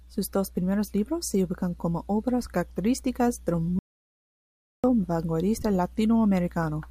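The audio input in this speech clip was likely lost for about a second, with the recorder writing silence in the meantime, which is an audio dropout to silence. Right after "como obras características del", at 3.79 s, the speech cuts off mid-flow into dead silence with no room tone, lasting 1.05 s until it resumes abruptly at 4.84 s. Whatever was spoken in that gap is simply missing from the recording.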